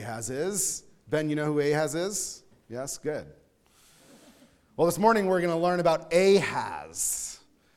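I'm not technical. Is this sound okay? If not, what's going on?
Yes, nothing in this sound stood out as a problem when I listened to it.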